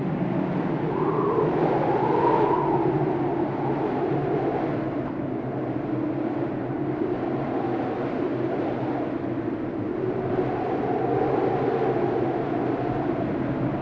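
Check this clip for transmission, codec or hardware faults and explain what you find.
There's one clear transmission fault: a skip ahead at about 5.08 to 5.10 s. Roughly 0.7 s of audio went missing, either lost in transit or thrown out when the jitter buffer overflowed with newer packets already queued. Nothing fills the hole. Playback just leaps forward, so the sound before and after is butted together with a small abrupt seam, and the stretch in between simply never plays. The G.722 call path underneath tops out at 8 kHz.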